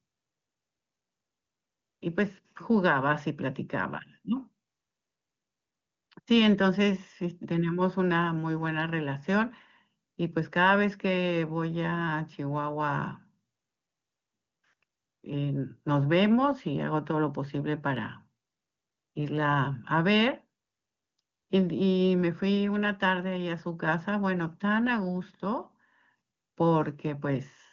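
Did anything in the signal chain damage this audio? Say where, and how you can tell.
No, the speech passes through the chain intact, carried by the AMR wideband (HD Voice) codec at 23.85 kbit/s, its top rate, where any coding damage is faint at most and every stage behaves as designed.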